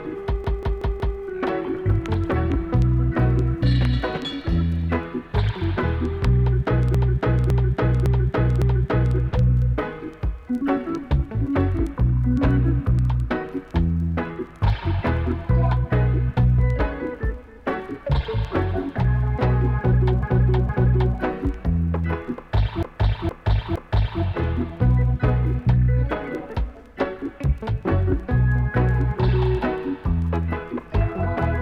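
Repeated frames cause stutters at 0.44–1.19 s (a 186 ms chunk looped four extra times), 6.95–9.17 s (557 ms, four more), 20.23–21.16 s (464 ms, twice) and 22.83–24.22 s (464 ms, three times). Each repeat stretches the audio.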